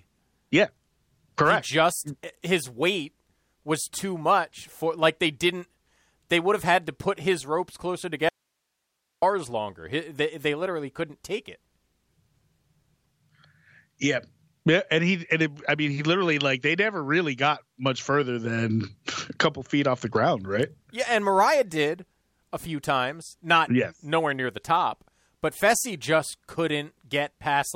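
At 8.29 s, right after "put his ropes closer", the speech cuts abruptly to a faint hiss around 55 dB down, an audio dropout to a faint residue lasting about 0.93 s until 9.22 s. It is likely a signal loss upstream while the path stayed live. The waveform collapses to a flat sliver and the spectrogram shows a sharp-edged band of pale broadband noise.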